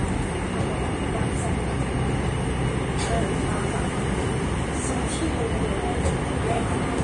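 Heavy Vorbis compression, likely at a low setting that fits around 32 kbps, runs throughout. The coder discards everything above about 10.6 kHz and quantises the remaining treble coarsely, so fine detail turns into hissy, grainy noise, tones sound roughened and attacks are smeared.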